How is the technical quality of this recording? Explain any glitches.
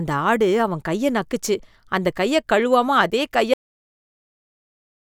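The recording has a cut-off end. At 3.54 s, right after "அந்த கைய கழுவாம அதே", the speech stops mid-sound. The final buffers were never written, so it drops straight to digital silence with no decay until 5.17 s.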